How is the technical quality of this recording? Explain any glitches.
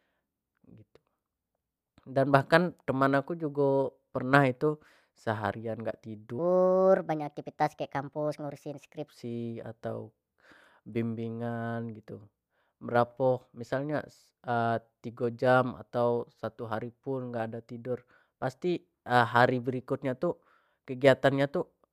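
One glitch stands out in this speech recording. From 6.39 to 9.08 s, a section at the wrong speed runs 1.28 times too fast, likely from playback on a mismatched clock, so the voice sounds hurried and roughly four semitones higher. Unlike a pure pitch shift, the tempo and pitch rise together.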